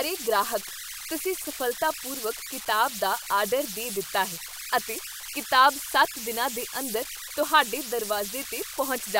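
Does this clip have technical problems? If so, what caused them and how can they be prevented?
Yes. Converter idle tones run throughout: a whistle around 1.5 kHz, about 10 dB below the speech. An undithered delta-sigma converter falls into repeating bit patterns. Adding dither prevents it.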